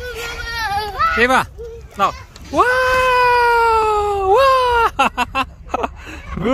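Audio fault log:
No faults were found in this clip. There is nothing to log for any part of the audio.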